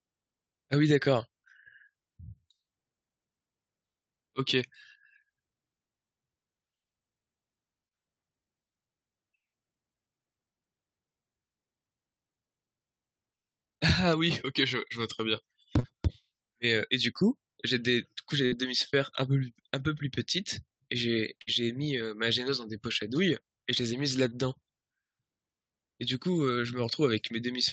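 At 15.79 to 15.85 s there is a short concealed packet loss: about 40 ms of the speech never reached the decoder in time, and the receiver bridged the hole by extending the preceding sound before blending back into the real signal. It comes across as a brief smear in the voice. A second, shorter one at 24.29 to 24.33 s covers about 20 ms and is heard as a quick wobble.

Between these, at 18.45 to 18.54 s and again at 21.42 to 21.49 s, are two bursts of packet loss, each about 60 ms of audio lost or arriving too late to play. In each case the decoder kept synthesising from the last sound and let it decay, so a voiced stretch turns into a short held buzz and unvoiced material into a fading hiss. The speech then picks up further along, with the intervening 60 ms gone rather than delayed.

The whole clip passed through a WebRTC call path with Opus. Its audio band stops at 8 kHz, and the coding noise points to a rate of around 32 kbps.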